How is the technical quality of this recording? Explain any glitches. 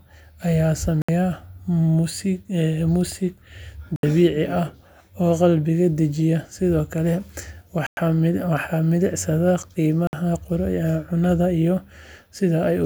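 The recording has four short dropouts. At 1.02, 3.96, 7.87 and 10.07 s the speech cuts to silence for 66, 70, 105 and 58 ms, then carries on. This is likely a Bluetooth stall, where interference delayed packets until the headphones' buffer emptied.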